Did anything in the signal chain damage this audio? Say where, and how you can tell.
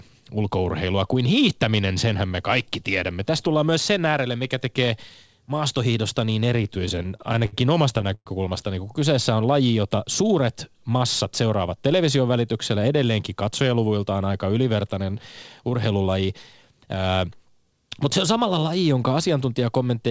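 Yes. The repeated stalls (stutter) come from the network and jitter-buffer stage. From 6.64 to 7.55 s, right after "mikä tekee maastohiidosta niin", the speech drags and catches nine times. Packets arrived late, the buffer kept running dry, and the receiver stretched the last sound to cover about 167 ms, with the longest hold 69 ms. On a spectrogram the harmonics smear into short horizontal streaks. The waveform shows repeated, slightly faded copies of one cycle.

A call audio freeze follows at 8.15 to 8.28 s, just before "niin kun". It most likely comes from a single packet delay that emptied the jitter buffer. The receiver filled 112 ms, and the last sound decays into roughly 60 ms of near-silence. Nothing is lost, so the words after it arrive 112 ms late. On the waveform this is a tapering envelope dropping to a flat line. The spectrogram shows a fading smear and then a blank strip, below the G.722 band edge at 8 kHz.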